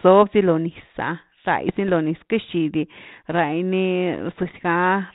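Speech over a narrowband ADPCM path, consistent with 32 kbit/s G.726, breaks into pops and rough, level-jumping bursts from 1.69 to 1.90 s, just before "lo niz", and again from 4.34 to 4.52 s. These are bit errors on the ADPCM link at well under one percent. Each flipped bit throws off the decoder's step size and predictor, so the disturbance rings on for a few milliseconds.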